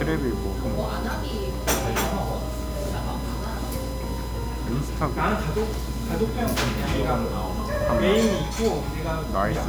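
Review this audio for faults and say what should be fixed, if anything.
A steady USB whine sits under the whole clip, fixed at 1 kHz, roughly 20 dB below the sound. USB's 1 ms frame timing is leaking in through the power or ground. To prevent it, power the interface separately or add a USB isolator or ground-loop break.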